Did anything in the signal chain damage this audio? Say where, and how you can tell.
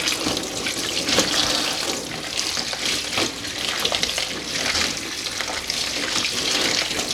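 No, nothing in this audio stood out on listening as a sign of damage anywhere in the signal chain.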